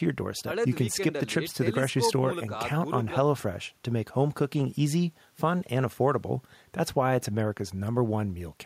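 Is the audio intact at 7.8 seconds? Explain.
Yes, the speech plays through cleanly at 7.8 seconds, with no dropout, click, distortion or other fault at that moment.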